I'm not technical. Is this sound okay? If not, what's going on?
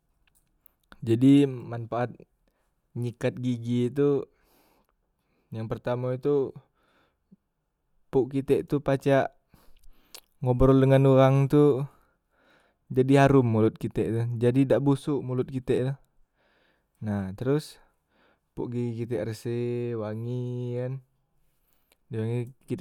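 Yes, nothing stood out as a problem when listening to this recording.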